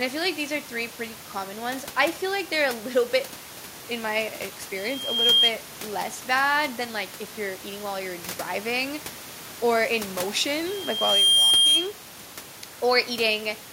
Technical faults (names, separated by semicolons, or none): loudspeaker feedback squeal